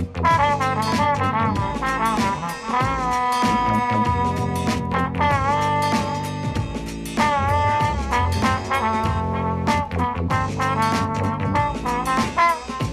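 No technical faults can be heard anywhere in the recording; the signal stays continuous and stable throughout, with no breaks, level jumps or added noise.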